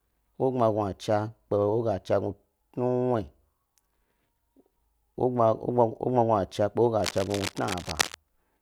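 A worn cable or connector was likely moved, its contact resistance jumping about rapidly. From 7.00 to 8.15 s this adds cable scratch noise: dense, uneven bursts of scratching and rustling laid over the speech, roughly 10 dB below it.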